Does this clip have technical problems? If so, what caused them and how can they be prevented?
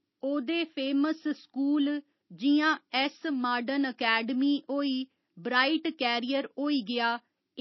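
Yes. MP3 compression damage runs through the whole clip. Nothing sounds above 5.8 kHz, so s sounds are dull. The encoder likely ran short of bits, which fits about 24 kbps. Weak detail switches on and off, giving a watery, swirly texture. Encode at a higher bitrate to prevent this.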